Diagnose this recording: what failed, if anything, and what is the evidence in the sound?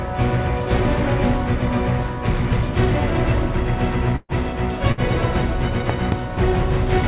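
Network stage: two bursts of packet loss, at 4.16 to 4.32 s and 4.92 to 5.00 s. The receiver stretched the last sound into a fading held tone, about 127 ms then 57 ms, with the first fading to 30 ms of silence. Roughly 120 ms and 60 ms of audio are gone. On a spectrogram, smeared horizontal bands sit within the 4 kHz-limited call band.

A loud pop, two sharp clicks between 5.90 and 6.14 s, peaks far above the surrounding level while the sound continues underneath. The likely cause is an analogue-side voltage step, such as a plug, switch or static discharge. It shows as tall waveform spikes and full-height vertical lines on a spectrogram.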